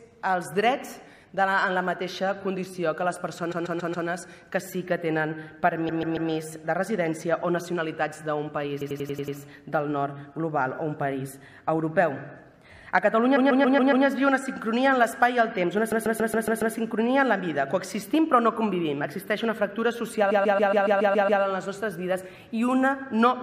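Repeated frames stutter the sound at 3.51–4.07, 5.88–6.30, 8.80–9.36, 13.35–14.05, 15.91–16.74 and 20.30–21.41 s. A compressed block of about 139 ms, or 93 ms at 8.80 s, replays. Each burst adds up to 1.1 s.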